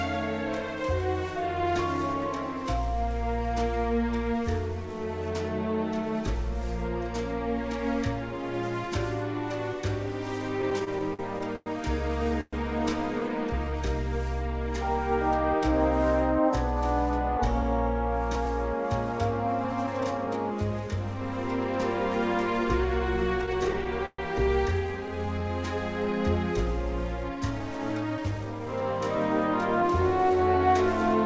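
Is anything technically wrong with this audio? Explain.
Yes, the delivery timing stumbles several times. The audio came through a call path whose band stops at 8 kHz, which fits G.722 at 64 kbps, and these faults sit on top of that.

There are repeated stalls (stutter) from 10.62 to 12.55 s and again from 23.42 to 24.20 s. In these spans packets showed up late or more slowly than they were played, so the jitter buffer kept running dry. Each time, the receiver stretched out the last bit of sound to cover the wait, fading it on the longer holes. The first stretch has 11 gaps adding up to 366 ms, with the longest at 119 ms, so about 19% of that span is covered-over sound. The second has 7 gaps totalling 174 ms, with the longest at 128 ms, about 22% of its span. Nothing actually drops out, but the sound catches and drags.

There's a jitter buffer slow-down at 13.21 to 13.78 s and again at 24.87 to 25.62 s, each coming just after one of the stutter runs. 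The buffer was low, so the receiver padded it by repeating single pitch periods or bits of pause over and over. That adds 54 ms in the first spot (92% speed) and 95 ms in the second (89%). The pitch holds, but things get drawn out.

There's a jitter buffer speed-up from 18.36 to 20.52 s and again from 27.29 to 30.68 s. Here the buffer had more queued than it wanted, so the receiver snipped out short chunks of one or a few pitch periods in a row to cut the delay. The first span runs at 104% and loses roughly a tenth of a second. The second runs at 107% and loses around 0.3 s. The pitch stays the same, and the second span comes across hurried.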